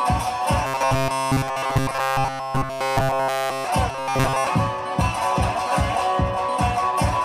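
From 0.65 to 3.64 s, and again from 3.90 to 4.47 s, there's robotic sound from repeated short buffers: a rigid metallic buzz at 134 Hz. It's likely a loop of roughly 7.5 ms buffers standing in for missing audio, covering nearly everything in the first stretch and most of the second.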